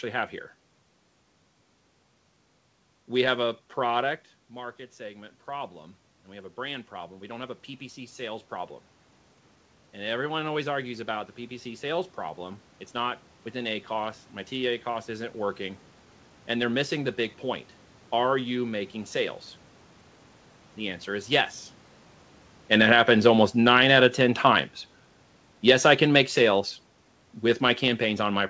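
From 4.48 to 8.80 s, the automatic gain rising responds to the talker moving back around 4 s, when the input falls by about 12 dB; the control lifts its gain by about 7 dB, so voice and room noise swell together. It happens again from 9.93 to 15.87 s, with about 6 dB more gain and the same joint rise in level and background. From 22.59 s to the end, automatic gain falling follows the talker moving around 22.5 s: the control lowers its gain, so the sound sinks along with its background.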